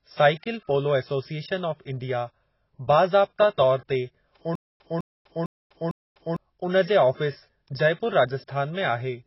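AAC compression runs throughout: the speech is dull and smeared, with nothing above 5.6 kHz, consistent with likely heavy AAC-LC coding at a very low bitrate, around 16 kbps.

A stutter with silent gaps occurs from 4.55 to 6.36 s: a 206 ms fragment repeats four times, every 453 ms, separated by about 247 ms of digital silence, likely from a stalled player replaying its last buffer.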